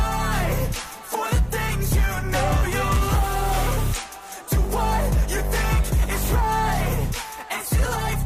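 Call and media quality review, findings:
Dropped samples at 7.24 s: single sharp click, a few samples missing so the waveform jumps ahead, likely a buffer handoff glitch in capture or playback.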